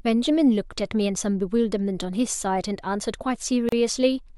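A gap at a join of encoded pieces appears at 3.69 s, running to 3.72 s, where the speech drops out for about 34 ms and then resumes exactly where it left off. The audio was encoded in separate segments and butted together untrimmed, so the encoder's start-up delay and the padding of the previous segment's final frame both survive as silence. The dropout has edges smeared by the codec, heard as a brief hiccup.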